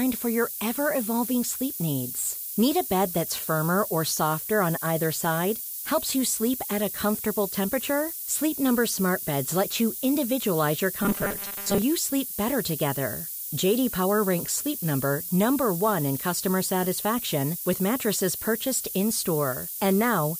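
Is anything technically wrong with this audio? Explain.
Yes. Throughout the clip, the speech is carried with low bit depth with noise shaping. Quantisation this coarse points to about 4 bits, and the rounding error is fed back and pushed toward high frequencies. The result is a constant, thin hiss, nearly as loud as the speech itself, that climbs steeply toward the top of the band.

From 11.03 to 11.82 s, between "let you individualize your" and "sleep better together", there is robotic sound from repeated short buffers. New audio is likely arriving too slowly, so the last 5 ms is looped and most of the real audio is skipped. The looping imposes a fixed 200 Hz metallic buzz that only loosely follows the speech.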